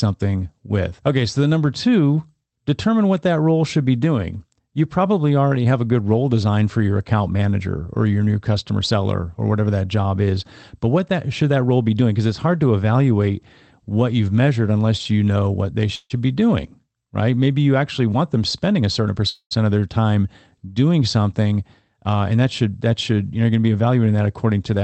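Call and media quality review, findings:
Call audio freeze, 15.95–16.12 s, between "you know what they" and "be doing right". Last sound stretched into a fading buzz for about 145 ms, then about 30 ms of silence. Likely jitter-buffer underrun from late packets. Speech resumes where it stopped: nothing lost, delay up 145 ms.

Call audio freeze, 19.29–19.53 s. Same pattern, longer: about 220 ms of decaying fill, ending in about 70 ms of silence. Playback resumes intact; latency grows another 220 ms.

Jitter buffer speed-up, 18.00–19.16 s, just before "of their time doing". Speech about 7% fast, pitch unchanged, sounds hurried. Buffer over target; receiver trimmed pitch-period-sized slices, around a tenth of a second in total.

Jitter buffer speed-up, 22.07–22.94 s, just before "should you know going". About 9% faster at the same pitch, again roughly a tenth of a second cut in repeated short pieces to shed excess delay.

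Audio carried over an Opus call path, bandwidth limited to 8 kHz.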